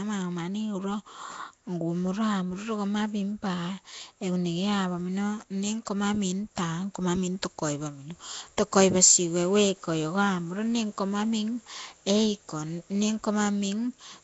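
Throughout, the speech has a rough, hissy halo and smeared, underwater tone, likely from Nellymoser compression; a spectrogram shows noise-filled bands and nothing above 7.7 kHz.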